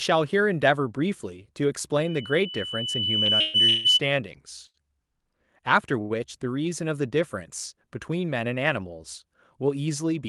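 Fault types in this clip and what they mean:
Loudspeaker feedback squeal: A microphone is picking up the loudspeaker it feeds, and the loop gain has risen above one at a single frequency, so that frequency reinforces itself. Here a pure tone at 3 kHz appears at 1.97 s and swells over roughly a second and a half until it sits around 10 dB above the speech. It persists until 4.00 s, masking the talker and overlapping the dropouts described below.
Short stall from a late packet: A packet arrived after its playout time, so the jitter buffer briefly ran dry and the receiver prolonged the last sound until the packet turned up, then resumed from the same point. Nothing is lost, but a sound is held too long with a faint buzz or dip. This occurs at 3.25–3.30 s (29 ms stretched), 4.67–4.84 s (74 ms) and 6.02–6.12 s (86 ms). Each one pushes the playback later by that amount.
Call audio freeze: At 3.40–3.56 s and 3.68–3.87 s, inside the feedback tone, playback halts for 138 ms and then 167 ms while the last sound is carried on as a fading buzz or hiss, with no drop to silence. 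The speech then picks up exactly where it stopped, so nothing is skipped and the audio runs later afterwards. The likely cause is packets held up in transit long enough to empty the jitter buffer.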